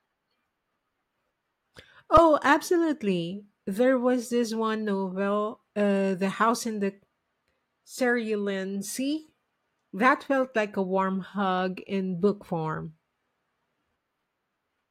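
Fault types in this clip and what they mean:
Underrun with held sample: at 2.17 s the buffer emptied and the waveform froze flat for 5 ms, unlike a dropout to silence, then resumed softly.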